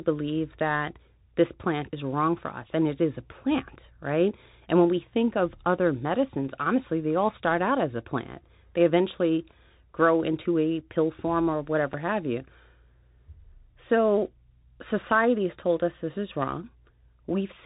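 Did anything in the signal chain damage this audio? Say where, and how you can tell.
Yes. Codec stage: the whole clip has a Bluetooth CVSD headset codec sound. Nothing gets past 3.8 kHz, sibilants come out scratchy, and a grainy hiss sits under the speech.

Buffer stage: at 11.93 s there's a block of digital silence, a 4.65 ms hole. Most likely the output buffer wasn't filled in time.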